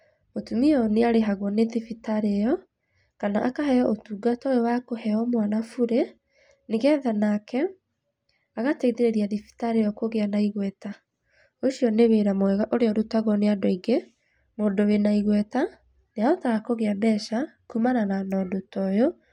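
Nothing in the speech stood out as a technical fault on listening.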